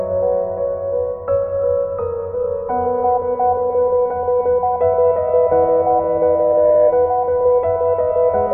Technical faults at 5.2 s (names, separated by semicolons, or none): loudspeaker feedback squeal